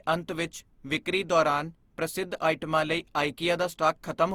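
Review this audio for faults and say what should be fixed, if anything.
Generation loss runs through the whole clip. The speech sounds swirly, smeared and hollow, and attacks blur. The likely cause is repeated lossy encoding, about three passes. Each pass requantises on a shifted frame grid, so the damage builds. The texture fits a 48 kbit/s Opus chain. Keep a lossless master and encode only once, at the final step.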